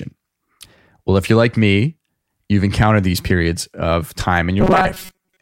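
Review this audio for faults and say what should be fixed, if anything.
Robotic sound from repeated short buffers runs from 4.60 to 5.42 s, right after "encountered these periods of". The speech becomes a rigid metallic buzz at 188 Hz for most of that stretch, likely from replaying a tiny chunk of about 5.3 ms while fresh audio arrives too seldom.

Prevent it by enlarging the playback buffer or fixing the upstream data delivery so the stream never runs dry.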